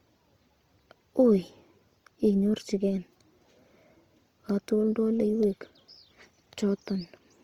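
Opus compression runs throughout the speech: the full bandwidth stays open, but the texture turns grainy, rough and noisy. This is likely the codec's music mode refilling starved bands with noise or folded copies of lower ones, which points to a bitrate near 24 kbps.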